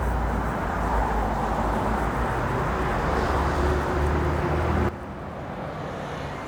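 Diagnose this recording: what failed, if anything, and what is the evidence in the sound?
A sudden gain jump hits at 4.89 s. From there to the end, the level drops by about 11 dB in one step, background included. This points to the digital gain stage, likely a gain setting applied instantly with no ramp.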